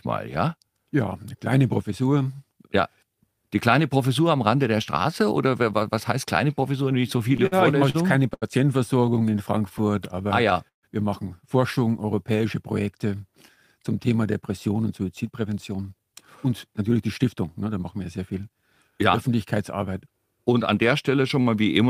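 The audio suffers from jitter buffer timing problems. Repeated stalls (stutter) occur from 6.83 to 8.44 s and again from 9.69 to 10.85 s. Packets arrived late or more slowly than playback, so the buffer ran dry and the receiver held the last sound until it could continue. The first stretch has ten stalls totalling 244 ms, the longest 78 ms. The second has five totalling 185 ms, with one stall of 148 ms. Nothing is lost, but the flow drags and catches. These abrupt hitches set it apart from the smoother stretching nearby. That stretching is a jitter buffer slow-down, from 9.00 to 10.54 s at 92% speed (adding 136 ms) and from 11.79 to 12.42 s at 90% (adding 72 ms). Here the receiver built up a reserve by repeating single pitch periods or bits of pauses many times over, so the audio plays slower at unchanged pitch, with drawn-out sounds rather than stop-start breaks. The first slow-down overlaps the second stutter stretch. 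From 14.42 to 18.57 s the opposite happens, a jitter buffer speed-up at 109%. With more audio queued than the target, the receiver trimmed short pieces of one or a few pitch periods in succession, removing around 0.4 s in total. Pitch stays the same while the audio sounds hurried, which separates it from a simple playback-rate error that would also raise the pitch.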